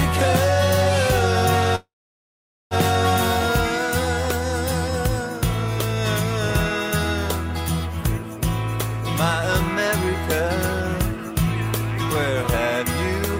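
At 1.75 s the sound turns into a brief fading buzz or hiss and then falls silent for about 0.83 s, resuming at 2.74 s exactly where it stopped. This call audio freeze likely came from delayed packets emptying the jitter buffer, inserting roughly a second of delay without losing audio.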